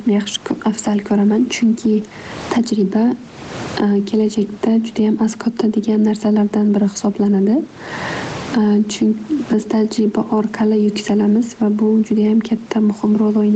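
Right from the start and all the way through, there's gain pumping on this speech. The gain swings by around 20 dB, pulling loud and soft parts closer together in level. That's likely a fast limiter or compressor reacting to input gain set far too high. The room noise sits about 32 dB under the voice, and everything sounds squashed.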